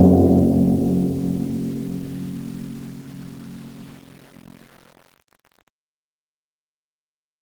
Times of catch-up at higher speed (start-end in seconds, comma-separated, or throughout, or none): none